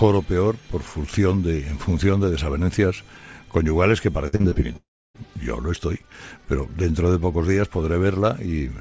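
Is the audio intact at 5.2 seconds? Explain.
Yes, only just: the sound resumes at 5.16 s after a gap starting at 4.77 s. The last sound is stretched into a fading buzz, then about 0.3 s of silence, and roughly 0.38 s never plays, likely a long network dropout.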